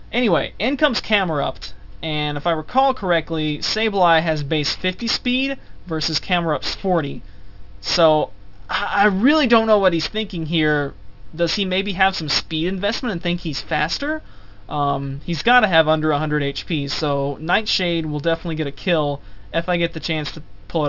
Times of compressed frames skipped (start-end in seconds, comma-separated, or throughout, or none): none